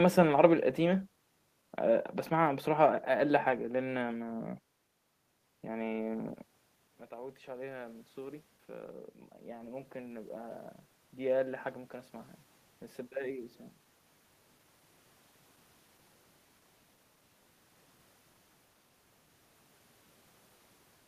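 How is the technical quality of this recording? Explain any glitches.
There is one glitch in this speech recording, a gain swell shortly after the talker moves back from the microphone at around 6.5 s.

Automatic gain rising, 7.13 to 8.53 s: over about 1.4 s the voice and the room noise behind it swell upward together, by about 4 dB. When the talker moved away, the level reaching the microphone fell by about 15 dB. The automatic gain control read that as a quiet input and slowly raised its gain, lifting the background along with the speech.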